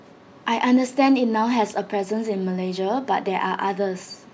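No technical faults are audible anywhere in this speech recording.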